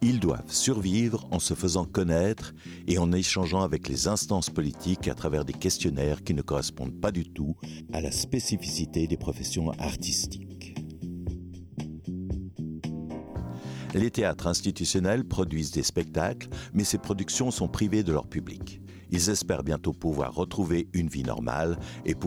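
From 7.35 to 13.35 s the audio takes on a hollow or phasey colouring from channel delay (comb filtering): one channel lags by well under a millisecond before the mono sum, cancelling shared content in evenly spaced fixed notches starting around 1.5 kHz.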